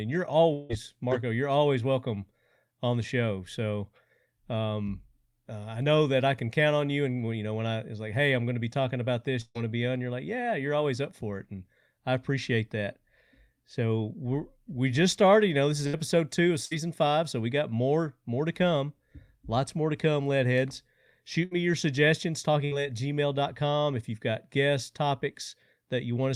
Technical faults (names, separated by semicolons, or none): long network dropout; burst of packet loss